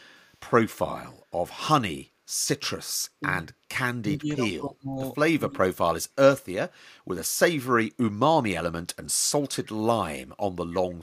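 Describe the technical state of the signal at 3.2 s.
At 3.2 s the echo canceller likely could not tell the talker apart from loudspeaker echo while both sides spoke, so it attenuated everything. That is speech suppressed in double talk: from 3.2 to 3.46 s the speech dips by up to about 10 dB, in pieces totalling roughly 150 ms.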